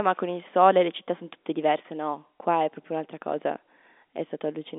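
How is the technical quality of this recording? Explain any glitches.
Nothing to report: the speech sits in the narrow band of a telephone line, roughly 250 Hz to 3.6 kHz with nothing above about 3.8 kHz, which fits G.711 A-law telephone coding, and that ceiling is simply how the format works.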